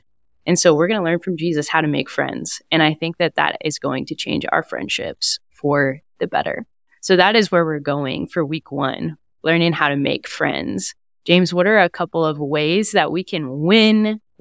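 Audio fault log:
Nothing stood out on listening to this speech.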